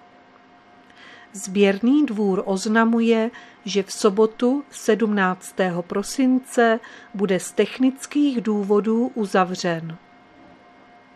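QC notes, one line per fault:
No faults detected.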